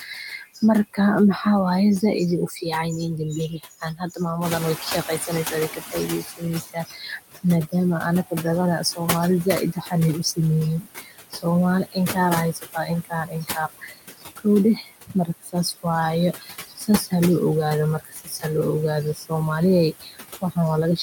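In this speech clip the noise suppressor works on the whole recording, pulling the steady background down by about 17 dB frame by frame, so noise artifacts remain: the residue dips between phrases and swells under them. Speech cut by the noise suppressor comes from the suppressor mistaking parts of the voice for noise. From 0.43 to 0.98 s it trims roughly a tenth of a second by up to about 9 dB. From 2.01 to 4.21 s it trims around 0.3 s by up to about 14 dB. From 5.26 s to the end it turns parts of the speech down by as much as about 21 dB, leaving them swallowed or faint. The noise suppressor catching up follows the room noise jumping by about 12 dB near 4.5 s, to roughly 10 dB below the speech. The noise estimate lags for 1.96 s, from 4.41 to 6.37 s, so the louder background first comes through under-reduced and then sinks as the estimate settles to about 14 dB of cut.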